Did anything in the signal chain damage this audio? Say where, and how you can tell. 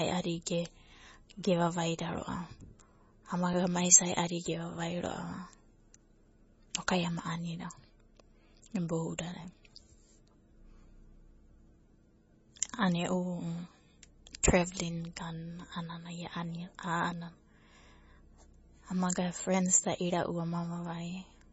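Yes, in two places. MP3 compression affects the whole clip: nothing is left above 7.6 kHz, and the speech has a heavily watery, swirly texture, with weak high components flickering in and out from frame to frame as attacks smear. This points to the codec stage, likely a low-rate MP3 encode at around 24 kbps. Starved of bits, the encoder zeroed weaker frequency lines and cut the treble at a fixed point.

A block of digital silence occurs at 3.53 s and lasts about 2 ms. The audio drops to nothing and resumes with no fade. At that length it registers as a tick or brief dip rather than an audible gap. This belongs to the driver or buffer stage. Zeros replaced the signal for that span, either because the output buffer was not filled in time or because a processing step produced invalid values that were replaced with silence.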